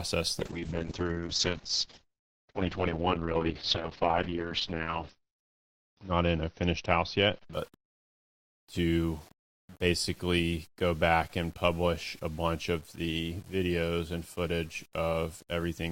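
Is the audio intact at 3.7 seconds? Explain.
No. At 3.7 s the audio sits inside a call bitrate drop that runs from 0.4 s to 9.33 s. The call's bandwidth estimate fell, so the encoder had to spend far fewer bits, and the coarse coding points to a fall from around 48 kbps to about 7 kbps. It stays near its lowest for about 4.4 s. The top end is cut from 20 kHz to about 6 kHz, so the sound turns muffled, rough and watery.

The audio at this moment also has low bit depth without dither, and it runs through the whole clip. The sound was rounded to very few levels with no dither, most likely an 8-bit conversion. Because the rounding error tracks the signal, the grit shifts with the sound, sitting roughly 30 dB below it. Quiet passages turn gritty and can sputter between adjacent steps.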